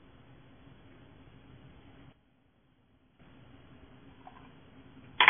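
MP3 compression runs through the whole clip, likely from heavy encoding at a very low bitrate, around 16 kbps. Nothing remains above 3.5 kHz, so the sound is dull, and weak frequency components flicker between frames, giving a watery, swirling texture and smeared attacks.

A sudden gain jump at 2.13 s drops the level by about 12 dB until 3.2 s, where it jumps back. The sound and its background noise fall and recover together with no ramp, most likely a digital gain change applied at a single sample.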